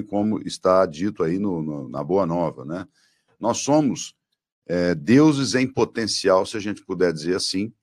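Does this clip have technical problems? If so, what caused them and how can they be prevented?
Yes. At 1.98 s, just after "dito aí no no", new audio arrived late and caused a repeated buffer: one 1.45 ms block, consistent with a 64-sample buffer, played twice, producing a brief click or buzz. Increasing the buffer size or giving the audio thread more scheduling headroom prevents this.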